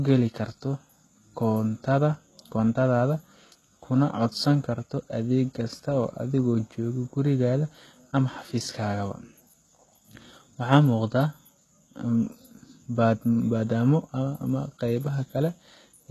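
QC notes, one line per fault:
throughout, HE-AAC compression: the speech was likely coded with HE-AAC at a low rate that fits about 16 kbps, so the treble is rebuilt from copied lower bands. Its harmonics misalign, making s sounds gritty and lispy, and nothing reaches above 12.3 kHz.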